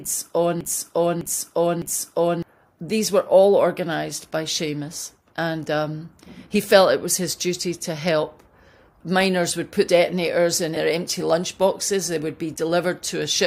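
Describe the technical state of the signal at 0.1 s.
At 0.1 s the signal is caught in a broken-record loop, already under way from the start to 2.43 s: a 0.61 s fragment repeats exactly, three times back to back, likely from a stalled player or stream, and the audio due in that span is lost.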